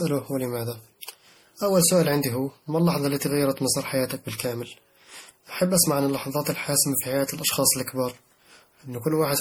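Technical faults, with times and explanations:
Throughout, generation loss: the speech is swirly, hollow and smeared, with blurred attacks, likely from about seven MP3 re-encodes, which fits a 64 kbit/s chain.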